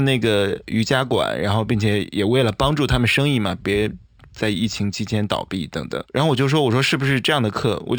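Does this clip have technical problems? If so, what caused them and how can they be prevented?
Yes. Imaging from linear upsampling runs through the whole speech clip. The sound appears to have been raised from a 12 kHz rate to 48 kHz by joining samples with straight lines, which filters poorly. The top of the original band is dulled, and a mirrored copy of it from 6 to 12 kHz, roughly 25 dB down, adds a faint metallic shimmer to sibilants. On a spectrogram, a faint reflected image of the speech appears above 6 kHz. To prevent it, resample with a proper band-limited resampler.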